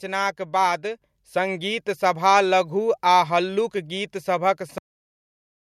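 At 1.02 s the microphone volume is stepped up. The level jumps by about 5 dB in a single step. The speech and the background noise get louder together, at the same instant. That is the sign of a gain change at the input device, not of the talker raising their voice. It happens with no fade. The call software judged the microphone too quiet and raised the input volume all at once. From that point the whole recording sits at the new, higher level.

At 4.78 s the clip has a cut-off end. The speech stops in the middle of a sound. There is no natural decay and no room tail. It drops straight to digital silence, which lasts to the end of the file. The final buffers of audio were never written or played. So the recording ends wherever the data ran out, not where the speech itself finished.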